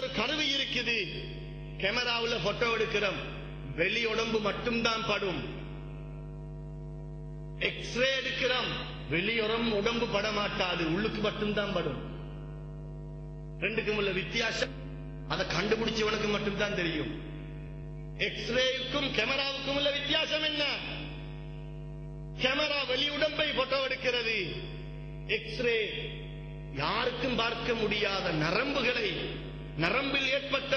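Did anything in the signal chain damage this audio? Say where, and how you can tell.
Yes, there's a skip ahead at 14.63 to 14.65 s. Playback jumps forward with essentially no gap, and roughly 400 ms of sound is just gone, its two sides butted together. That points to the network or jitter-buffer stage discarding a chunk while later audio was already queued.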